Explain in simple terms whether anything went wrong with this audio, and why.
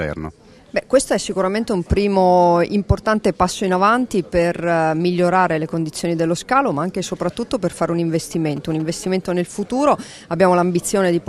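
Something did go wrong, near the end. From 8.34 to 9.06 seconds there is a burst of GSM signalling bursts. It sounds like a quick, galloping pattern of ticks and short buzzes, repeating at about 217 times a second. It sits fairly quietly under the main audio. A nearby 2G mobile phone caused it. While signalling to the network, it sent short radio bursts. The audio wiring picked them up and turned them into sound.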